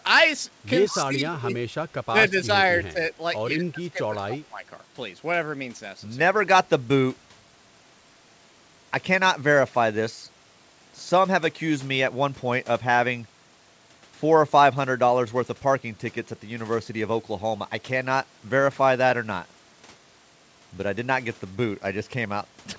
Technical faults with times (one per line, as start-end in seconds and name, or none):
0.90-1.49 speech suppressed in double talk
2.10-2.48 speech suppressed in double talk
2.92-2.99 speech suppressed in double talk
3.51-4.64 speech suppressed in double talk